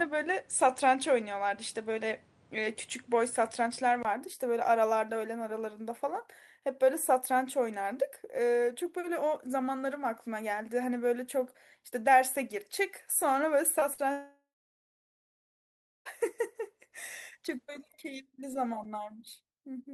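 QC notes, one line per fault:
0.0–4.05 s, input switched to a poorer device: the opening sounds boxier, with nothing above 10.4 kHz and a background noise floor about 35 dB under the signal at much the same level. A 20 ms gap at 4.05 s marks the change, likely a switch to a narrower-band microphone path.
13.79–13.83 s and 13.93–14.00 s, short concealed packet loss: roughly 20 ms and 40 ms of audio failed to arrive. The decoder extended the preceding sound to bridge each hole, then blended back, leaving two brief smeared wobbles close together.
14.12–16.07 s, long network dropout: about 1.94 s of audio is gone. The receiver stretches the last sound into a fading buzz or hiss for a few tenths of a second, then roughly 1.6 s of silence follows. The sound resumes without the lost stretch, likely from the connection stalling.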